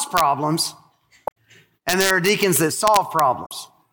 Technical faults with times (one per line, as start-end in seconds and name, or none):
0.17-0.20 integer overflow
1.24-1.37 damaged data in a compressed stream
1.89-3.19 integer overflow
3.42-3.51 damaged data in a compressed stream